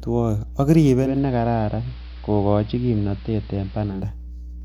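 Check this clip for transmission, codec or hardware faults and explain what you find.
Two faults are present: a mains hum across the whole clip, and a digital radio blending to analogue in the middle.

Mains hum runs from start to finish. It is a steady low tone at 60 Hz, fairly loud and sitting not far below the speech. A ground loop or a nearby transformer is leaking the power line into the signal path. It sounds like a constant drone under the speech. It does not change when the speech pauses.

The digital radio blending to analogue starts at 0.97 s and lasts until 4.08 s. The receiver lost its digital stream and faded over to the AM broadcast of the same station. Each crossfade takes about 231 ms. The level drops by about 1 dB. A faint hiss, well below the speech, comes up with the analogue signal and disappears again when the digital stream returns.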